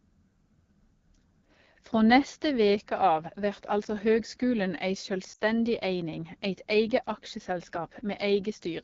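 From the start, the speech carries AMR wideband (HD Voice) codec damage that is plainly audible. The codec models speech up to 6.4 kHz as pulses driving a vocal tract filter and fills the band up to 7 kHz with shaped noise. Here the sound is rough and raspy, with a gritty, buzzy texture. That fits one of the two lowest AMR-WB modes, around 8.85 kbit/s, where too few bits reach the excitation to carry the fine detail of the voice.

From 5.33 to 5.44 s there are lost AMR speech frames. The decoder had no valid data for about 60 ms, which fits three 20 ms frames failing their checksum in a row. For that stretch it repeated the last good pitch and vocal tract settings at falling gain. The sound drops to near silence within two frames, as wideband concealment does. It then comes back weak and rough for a moment before the codec settles.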